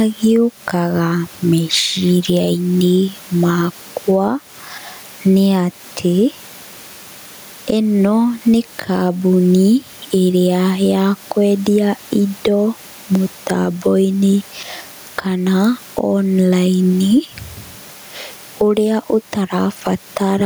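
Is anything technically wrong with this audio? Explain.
Yes. Gain pumping runs through the whole recording, with the gain swinging by around 10 dB; the room noise sits about 34 dB below the speech. Loud and quiet syllables end up closer in level, so the speech sounds squashed. The likely cause is microphone gain set far too high, with a fast limiter or compressor clamping down on each loud moment and releasing in the gaps.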